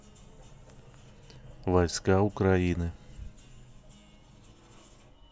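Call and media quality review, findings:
No audible faults found in the speech; nothing to attribute to any component.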